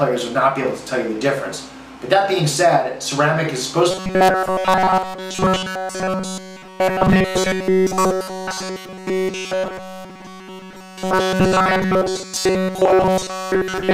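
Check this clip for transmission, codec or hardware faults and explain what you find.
One fault is present: robotic sound from repeated short buffers, from 3.91 s to the end of the clip at 13.94 s. The sound becomes a rigid 188 Hz buzz, likely because a short buffer of about 5.3 ms keeps being repeated while new audio is skipped. The waveform shows roughly repeating cycles throughout, and the spectrogram shows stacked harmonics at multiples of 188 Hz.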